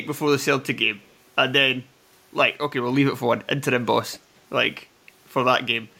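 Speech clip with two brief bursts of echo leak, at 1.03 to 1.14 s and 4.12 to 4.20 s. A faint delayed copy of the speech trails about 201 ms and 215 ms behind. The second is noticeably louder. The likely cause is a far-end echo canceller passing residual loudspeaker pickup back.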